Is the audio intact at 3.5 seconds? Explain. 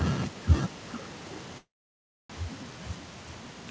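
No. At 3.5 s you're inside an echo leak that runs from 0.67 s to the end of the clip. A delayed copy of the speech trails the original by about 418 ms, sitting well below it, roughly 20 dB down. That sounds like a faint, lagging ghost of the voice. The likely cause is the far end playing the call over a loudspeaker, with its echo canceller letting part of the mic pickup slip back into the call.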